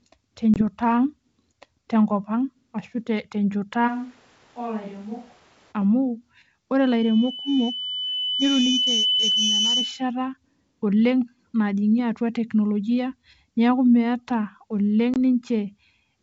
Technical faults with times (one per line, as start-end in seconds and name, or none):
0.54-0.62 packet loss on an ADPCM call
3.89-5.71 switch to a distant microphone
6.82-10.13 loudspeaker feedback squeal
15.14-15.16 packet loss on an ADPCM call